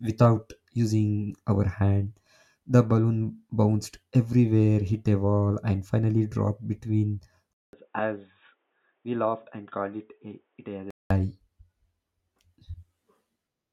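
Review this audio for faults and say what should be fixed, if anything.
From 7.53 s to 11.1 s, just after "and finally dropped between", a 200 ms silence is followed by speech that is dull and band-limited, with nothing above 3.8 kHz. It is about 10 dB quieter and carries a new noise floor roughly 45 dB below the signal. This pattern fits the input likely being switched to a poorer device. Lock the recording input to one fixed device and disable automatic device switching during capture.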